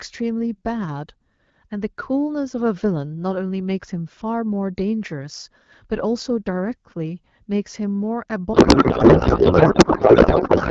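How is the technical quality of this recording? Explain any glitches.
The recording has one serious glitch: a codec payload misread that wrecks the last two seconds of speech. Before it, the AMR wideband (HD Voice) codec leaves only light coding damage, consistent with a 12.65 kbit/s mode.

From 8.53 s to the end at 10.70 s, the speech turns into garbled noise and warble that barely tracks the talker. The AMR decoder is parsing frames with a different bit packing than the sender used. The pattern fits octet-aligned frames read as bandwidth-efficient, which shifts every field out of place.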